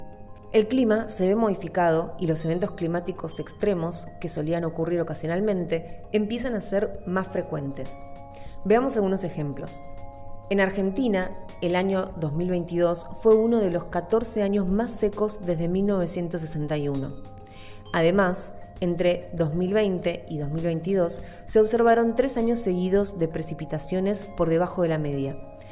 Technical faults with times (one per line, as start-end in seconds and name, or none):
none